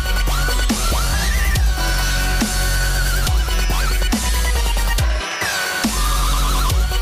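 No technical faults can be heard in this clip.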